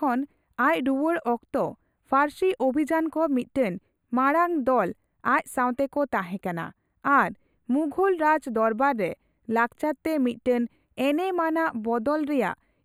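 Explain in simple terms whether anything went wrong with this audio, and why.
Something went wrong throughout this speech. It is a channel delay, causing comb filtering. One side arrives about a tenth of a millisecond late, and the two sides get mixed together. High tones start cancelling near 5 kHz, so the speech sounds hollow and dull.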